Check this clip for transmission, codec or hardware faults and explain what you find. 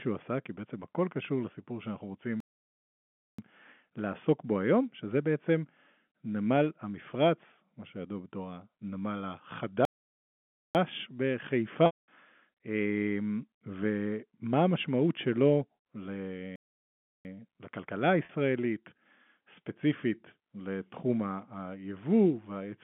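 The speech has two kinds of fault: three playback stalls and two bursts of packet loss with pitch repetition. The telephone-band G.711 coding underneath, limited to roughly 150 Hz to 3.4 kHz, is not one of them.

Playback stall, 2.40 to 3.39 s (about 0.98 s), 9.85 to 10.75 s (0.90 s) and 16.56 to 17.25 s (0.69 s): the player was likely starved of data or blocked, so the speech cuts to silence mid-flow before resuming.

Packet loss with pitch repetition, 11.86 to 12.08 s (220 ms) and 18.25 to 18.29 s (40 ms): the receiver bridged missing packets by repeating the last pitch period. The short gap sounds like a briefly held, buzzy tone. The longer one fades to silence, and the speech returns through a quick cross-fade.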